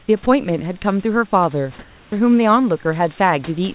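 For the first 0.08 s, the faint background, about 36 dB below the loudest passages, is a smooth, featureless hiss, barely a decibel different in level from the real room noise that follows. This is comfort noise in place of the background: the sending side's silence detection likely stopped transmitting, and the receiver filled those 80 ms with synthetic noise loosely matched to the room. Throughout, the audio stops near 4 kHz, which fits a G.711 A-law call path.

At 0.23 to 0.26 s, a brief stretch of sound gives way to that same even noise for about 30 ms, clipping roughly 20 ms of the sound itself before it returns. This is sound dropped by the voice detector. The detector likely judged a quiet moment of speech to be background, so the sender paused and the receiver substituted generated noise until detection resumed.

From 1.79 to 2.12 s, a 330 ms pause again loses the texture of the room. 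The background sits about 30 dB below the loud parts, and the substitute runs roughly 1 dB off the real level, so the change is heard as flattening rather than as a drop in loudness. This is the same comfort-noise substitution, likely triggered by discontinuous transmission.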